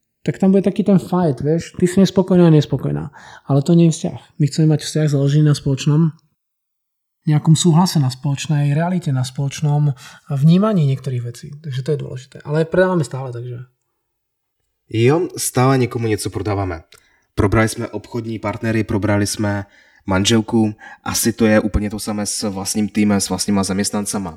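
A speech recording with channels drifting apart for its whole length: the left and right sides were captured on devices running from separate clocks that disagree by something like 200 parts per million, so the offset between them grows steadily to roughly 4 ms by the end. Folded to mono, the sound takes on a slow flanging sweep. A spectrogram of the mono sum shows comb notches gliding gradually through the frequencies.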